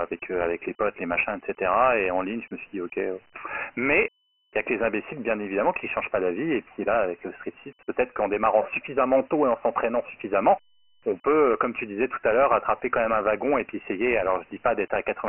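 From start to finish the speech sounds narrow and gritty, with a hiss that rides along with each phrase and heavy codec damage throughout. Nothing is heard above 3 kHz, and the low end thins out below about 300 Hz. This is Dialogic VOX ADPCM: each sample is coded as a 4-bit step relative to the last, and the 3 kHz ceiling points to a 6,000-sample-per-second rate, about 24 kbps.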